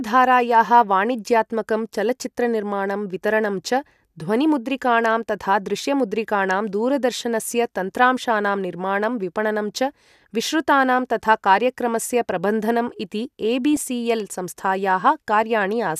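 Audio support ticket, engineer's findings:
Short chirpy burst of noise, 13.73–13.78 s, roughly 50 ms, peaking around -20 dBFS. Corrupt frame decoded: bit errors in about two compressed frames, played anyway by the decoder; misread gains and codes throw energy into wrong frequencies for the damaged frames' duration.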